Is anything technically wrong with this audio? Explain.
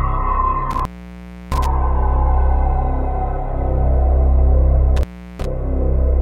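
Yes, there is intermittent contact twice, from 0.71 to 1.66 s and from 4.97 to 5.46 s, opening for about 0.67 s and 0.36 s. A loose plug or cable momentarily breaks the connection. The sound cuts out with crackle at the edges and faint hiss inside. The crackling edges distinguish it from a clean digital dropout.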